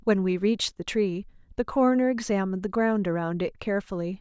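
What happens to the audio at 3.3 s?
Nothing goes wrong at 3.3 s; the speech there plays through intact, with no dropout, click, distortion or other fault at that moment.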